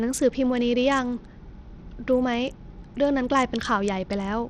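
Bluetooth SBC compression, throughout the speech clip: plainly audible gritty quantisation noise with no content above 18.3 kHz, likely from a starved SBC bit pool, consistent with roughly 80 kbps.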